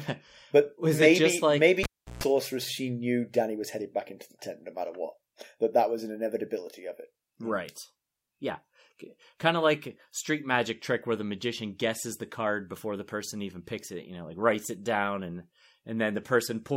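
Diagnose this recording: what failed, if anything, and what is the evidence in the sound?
Analogue wiring failed: a cable pulled and plugged in, 1.83 to 2.24 s. A pop opens 0.35 s of near silence, including 0.14 s of 60 Hz buzz while only the plug tip connects, then another pop. Waveform: spikes flanking a flat gap. Spectrogram: broadband vertical lines at the pops, narrow lines at 60 Hz harmonics.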